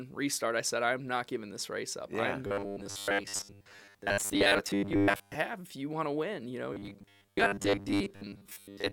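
A speech clip with robotic sound from repeated short buffers, from 2.47 to 5.35 s and from 6.73 to 8.92 s. The voice becomes a rigid metallic buzz at 100 Hz. Most of the audio is skipped. This likely comes from a 10 ms chunk being replayed.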